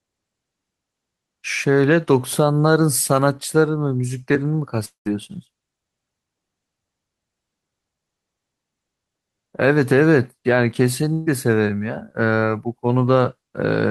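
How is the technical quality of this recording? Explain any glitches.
The recording has two glitches, both gaps in the audio stream.

The first runs from 4.85 to 5.07 s. The last sound before it carries on as a fading buzz or hiss. Then about 120 ms of near silence follows. The speech resumes with roughly 200 ms missing. This is likely a long network dropout. No audio reached the receiver for that stretch. The receiver stretched the final sound to cover it, then gave up and left silence until packets arrived again.

The second is at 11.13 to 11.28 s. It is a burst of packet loss. A short run of packets, about 140 ms of audio, never arrived in time. The receiver repeated the last sound and lowered it as the gap went on. Here the fill covers nearly the whole gap, about 130 ms, with no silent part. It is heard as a brief held, fading sound. Then speech jumps ahead, with that piece gone.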